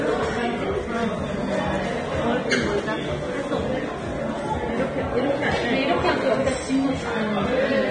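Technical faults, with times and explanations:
Throughout, Vorbis compression. Nothing is heard above 9.7 kHz. The treble is heavily damaged, sounding hissy and grainy, with roughened tones and smeared attacks. The likely cause is low-quality Vorbis coding, fitting a bitrate near 24 kbps, where coarse quantisation turns fine detail into noise.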